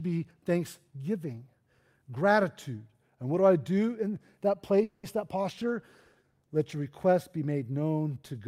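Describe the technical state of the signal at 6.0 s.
At 6.0 s the speech is inside a call bitrate drop running from 5.43 to 6.84 s, just before "request be". The bandwidth estimate fell and the encoder coded more coarsely, which fits a fall from about 64 to 22 kbps. The sound turns rough, watery or muffled. A spectrogram shows the upper band cut away and a smeared texture until it recovers.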